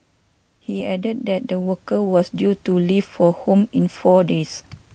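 From 0.67 s to 2.67 s the level climbs steadily by about 9 dB, the signature of automatic gain rising: the gain control judged the input too quiet and pushed its gain up over those two seconds. What separates it from a talker simply leaning toward the microphone is that the background noise swells right along with the speech. The slow ramp also rules out a sudden gain step, and the rise is carried through the call codec's roughly 12 kHz band.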